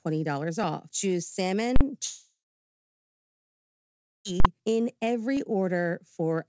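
Speech clip, carried over a call path whose band stops near 7 kHz, which fits G.722. Invalid numbers at full scale strike at 1.76 to 1.81 s and again at 4.40 to 4.45 s. Each 46 ms block is pinned at one extreme value, far beyond the speech peaks, which fits a 2048-sample block, and is heard as a sharp, very loud burst. A long network dropout is the likely cause of the gap from 2.06 to 4.27 s. The last sound is stretched into a fading buzz or hiss, then about 1.9 s of silence follows. About 2.2 s of speech is lost before the audio resumes. At 5.37 s a dropped buffer, likely from an overrun, cuts out a piece of audio. The sound jumps ahead by a few milliseconds, with no silence at the join.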